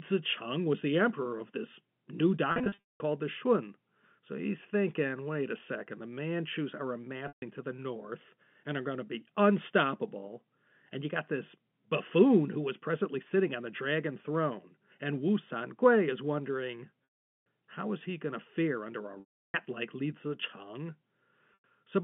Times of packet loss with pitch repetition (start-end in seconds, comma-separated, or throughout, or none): 2.52-3.00, 7.28-7.42, 17.04-17.46, 19.20-19.54, 21.54-21.64